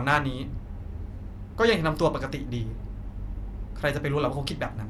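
Speech recording with no technical faults audible anywhere in it.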